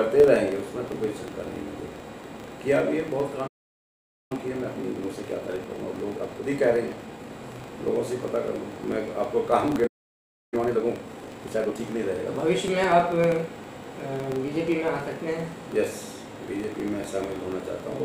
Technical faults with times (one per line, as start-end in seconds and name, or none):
0.00-18.05 filter restarted on every block
3.47-4.32 playback stall
4.32-7.32 time-compressed catch-up
9.86-10.54 playback stall
10.54-11.84 time-compressed catch-up